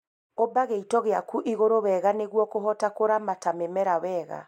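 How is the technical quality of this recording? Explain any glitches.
No glitches: the speech recording shows no technical faults.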